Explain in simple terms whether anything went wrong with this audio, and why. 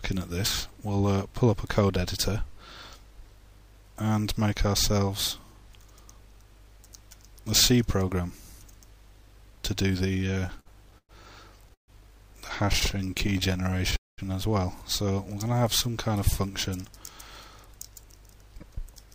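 From 10.13 to 11.11 s the sound catches and drags nine times, the longest hitch about 0.11 s. At 12.73 to 13.94 s it happens again as fifteen tiny hitches. This is repeated stalls (stutter): data arrived late, so the receiver kept stretching the last sound while it waited.

At 11.74 to 11.90 s and again at 13.96 to 14.20 s the sound stops briefly, mostly into silence, then carries on where it left off. This is a call audio freeze, likely caused by data held up in transit, which inserted pauses of about 0.14 s and 0.22 s.

From 12.65 to 13.58 s the audio runs slightly slow, at 96% speed, and from 15.34 to 16.09 s it slows to 92%, with pitch unchanged. This is jitter buffer slow-down: the receiver repeated tiny slices to rebuild its reserve.

From 17.66 s to 19.07 s the audio runs slightly fast, at 103% speed. This is jitter buffer speed-up: the receiver trimmed roughly 40 ms of tiny slices to cut its delay.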